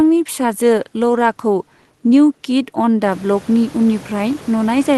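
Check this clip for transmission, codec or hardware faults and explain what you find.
No transmission, codec or hardware faults are present.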